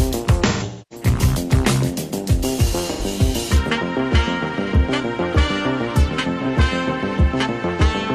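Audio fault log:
0.46–1.06 s, 2.91–3.02 s, 6.41–6.46 s: AAC frame loss with concealment. Decoder reuses the last good spectrum, so brief gaps smear noisily and the roughly 0.3 s run fades toward silence. The spectrogram shows blurred, flat columns, and the waveform dips.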